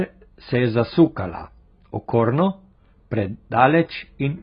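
Speech throughout, dulled by heavy AAC compression: nothing sounds above 5 kHz, and sibilants come out fizzy and warbling, which is likely from AAC-LC at a low bitrate, around 16 kbps. A spectrogram would show a hard ceiling at 5 kHz.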